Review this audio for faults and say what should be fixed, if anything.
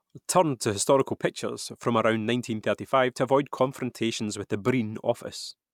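Nothing to fix: no faults are audible anywhere in the speech.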